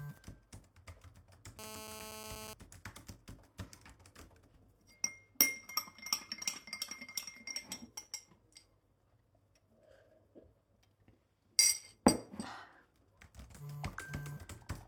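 A steady, raspy 217 Hz buzz runs from 1.59 to 2.54 s, about 8 dB below the audio. This is GSM phone buzz: a nearby call's radio bursts were rectified by the audio circuit.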